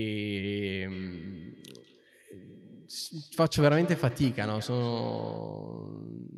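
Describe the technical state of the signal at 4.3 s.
At 4.3 s a feedback echo between two devices is active (0.91 to 5.57 s): one device replays the other's microphone, so the speech returns roughly every fifth of a second, thinner and ringing, at about 15 dB below the speech.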